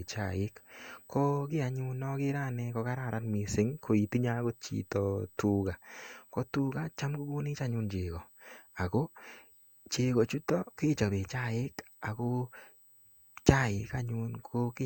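Throughout the speech runs a USB whine: a steady, fixed-pitch tone at 8 kHz, strongest at its 16 kHz multiple and roughly 30 dB below the speech, from the bus's 125-microsecond microframes leaking into power or ground. Unlike low mains hum, it sits high and never drifts.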